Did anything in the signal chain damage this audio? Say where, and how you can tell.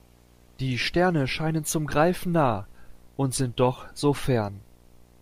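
Yes. In the analogue wiring, a screen or video cable is coupling into the audio path, causing video or display buzz. A buzz at the 60 Hz field rate, with hash above it, sits under the speech for the whole clip, roughly 30 dB below it.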